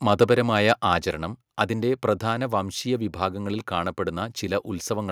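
Microphone overload from 0.69 to 0.93 s gives the speech a harsh, crackly edge on its loudest peaks. The input was likely driven about 3 dB past the converter's ceiling, so a small fraction of samples have their tops sheared flat. Microphone volume stepped down at 1.02 s, just before "അതിന്റെ പ്രധാന വംശീയ വിഭാഗങ്ങളിൽ": voice and background fall together by about 3 dB in a single step. This is the likely result of call software reacting to the distorted peak by cutting the device's input gain.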